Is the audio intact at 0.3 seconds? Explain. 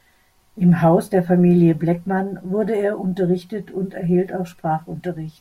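Yes, the audio is intact at 0.3 seconds, with no dropout, click, distortion or other fault at that point.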